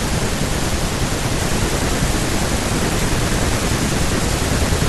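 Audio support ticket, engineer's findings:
Chunks out of order at 2.09–2.13 s in the speech. Brief jumbled blip. Two adjacent chunks of about 21.3 ms each play swapped, so one arrives a chunk late and lands after its successor. Nothing dropped, just misordered, giving three hard joins. Probable component: jitter buffer or write queue reordering a late block. Worth checking sequence handling there.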